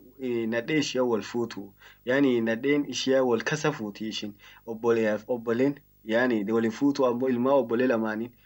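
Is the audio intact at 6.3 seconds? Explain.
No. Video or display buzz runs through the whole clip, including 6.3 s. A screen or video cable couples into the speech path, leaving a 50 Hz field-rate buzz with hash above it and a faint 15.6 kHz line-rate whine, roughly 35 dB below the speech.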